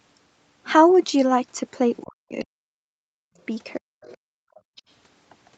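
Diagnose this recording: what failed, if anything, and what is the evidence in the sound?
The fault sits in the call processing stage. A faint second voice surfaces in short scraps at 1.96–2.03 s, 4.01–4.17 s, 4.55–4.59 s and 4.76–4.82 s, roughly 20 to 35 dB below the talker. This is likely the other side's voice leaking through: the loudspeaker's output reached the microphone and the echo canceller's residual suppression missed it. On a spectrogram these appear as brief, weak harmonic streaks unrelated to the main talker's pitch track.

From 2.03 to 3.38 s the talker's own level collapses in patches, at worst by roughly 40 dB and for about a second in total. This is speech suppressed in double talk, likely because the canceller could not tell near-end speech from echo while both sides were active and attenuated everything. The waveform shows the envelope punched down in chunks mid-phrase.

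The room sound itself drops out at 3.81–4.01 s by about 40 dB and again at 4.18–4.76 s by about 39 dB. This is background gated by the echo canceller: with the loudspeaker active, the canceller clamped the microphone hard and released it afterwards. On a spectrogram the noise floor goes abruptly dark across the whole band, up to the 8 kHz ceiling of the Opus path, then snaps back. The waveform shows near-silent gaps with sharp edges.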